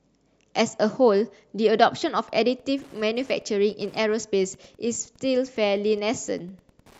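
Speech with Wi-Fi interference from 2.00 s to the end at 6.99 s. A faint, steady ticking sits well below the voice. It repeats every 102.4 ms, about ten ticks a second. A nearby Wi-Fi radio's beacon bursts are being rectified by the audio circuit.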